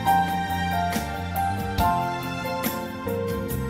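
No technical faults are audible.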